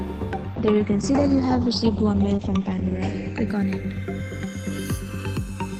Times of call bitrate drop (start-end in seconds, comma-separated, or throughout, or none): 0.57-5.13